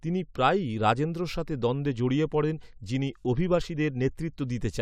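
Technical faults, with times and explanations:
No technical faults are audible.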